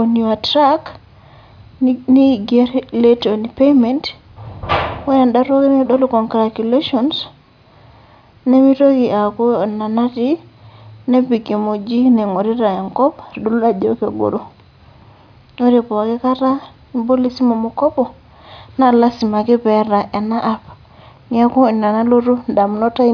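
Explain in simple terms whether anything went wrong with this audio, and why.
Nothing went wrong with this speech recording.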